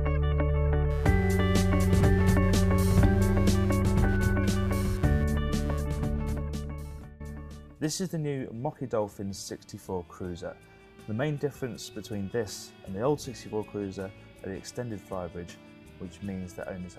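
From 0.9 to 5.8 s a chirping buzz, pulsing at around 150 Hz and roughly 25 dB below the sound, is computer activity noise: processor or graphics load disturbing the shared ground. Unlike steady mains hum, it flickers with the machine's workload, not with the audio.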